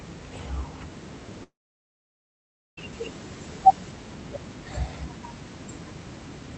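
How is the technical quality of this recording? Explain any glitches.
The recording has one serious glitch, a gap of well over a second, heard over room noise about 14 dB below the speech and a call codec that removes content above 8 kHz.

From 1.43 to 2.79 s there is a long network dropout, likely caused by audio packets failing to arrive. The receiver stretches the last sound into a brief fading buzz or hiss, then leaves about 1.26 s of near-silence before speech resumes. Unlike a deliberate mute, the receiver's brief tail is audible, and unlike an edit, the lost stretch is simply gone.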